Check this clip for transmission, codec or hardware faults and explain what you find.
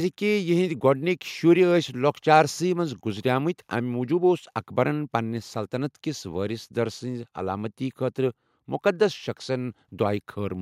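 No faults turn up anywhere in this recording.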